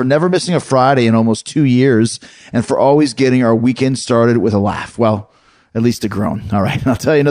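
From 5.75 s to the end, the audio was raised in rate by straight-line interpolation between samples, which fits a step from 22 kHz to 44.1 kHz. This is imaging from linear upsampling: that crude interpolation filters poorly, so the top of the original band is dulled and a mirrored copy of the spectrum survives in the 11 to 22 kHz region, roughly 35 dB below the speech. It adds a faint metallic shimmer to sibilants.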